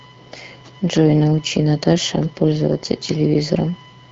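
From start to finish, a fixed-pitch USB whine sits on the speech: current drawn in 1 ms bus frames leaks into the audio, producing a 1 kHz tone, strongest at its 3 kHz harmonic, roughly 30 dB below the speech. The speech also carries plainly audible AMR wideband (HD Voice) codec damage, rough and raspy, with nothing above 7.8 kHz. That fits one of AMR-WB's lowest modes, around 8.85 kbit/s.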